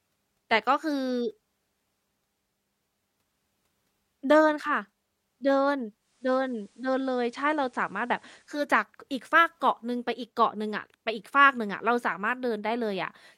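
From 5.96 to 8.72 s, digital radio blends to analogue FM over 0.31 s. Faint hiss appears, and level holds steady.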